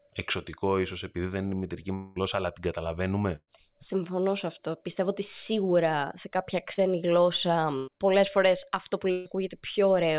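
A speech clip of a narrowband call, with nothing above 4 kHz, which fits G.711 A-law. At 1.94 to 2.18 s, about 220 ms of audio is lost. The last sound is stretched into a fading buzz or hiss until the speech returns further on. This is likely a long network dropout. Three bursts of packet loss follow, at 3.36 to 3.49 s, 7.77 to 7.89 s just before "πολλέ φορέ αυτό που", and 9.11 to 9.27 s just after "πολλέ φορέ αυτό που". Each loses 100 to 140 ms. The receiver holds the last sound as a decaying buzz or hiss, then jumps ahead. The first burst ends in 40 ms of silence. At 6.73 to 6.79 s, after "ότι σίγουρα σε κάποια", a short concealed packet loss hides 40 ms. It leaves a brief smear where the gap was filled from the preceding sound.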